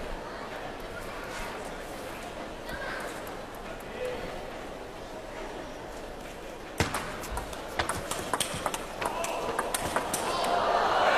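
At 2.04, 6.21, 9.15 and 10.51 s, abrupt skips with no silent gap point to likely dropped buffers (overrun), each losing around 5 to 10 ms.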